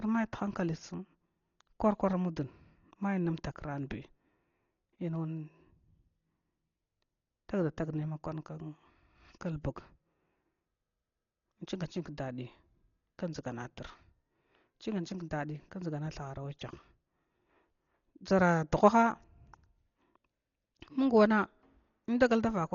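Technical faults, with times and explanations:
Throughout, Dolby Digital compression: dull, band-limited speech with nothing above 7 kHz and rough, fluttering noise, likely from heavy AC-3 coding near 32 kbps.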